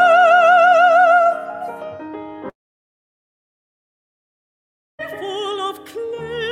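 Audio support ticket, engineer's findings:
Long network dropout, 2.49–5.05 s. Short fading buzz continuing the preceding sound, then near-silence for about 2.5 s. Audio resumes at 5.05 s with that stretch lost. Likely transport packet loss with receiver concealment decaying out. Waveform: flat gap. Spectrogram: smeared tail, then blank band.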